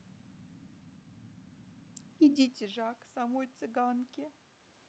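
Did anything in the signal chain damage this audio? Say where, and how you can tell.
Yes. In the call processing stage, automatic gain rising starts at 2.58 s, after the talker moves away around 2 s and the input falls by about 19 dB. The gain climbs about 6 dB until 4.18 s, swelling voice and room noise together.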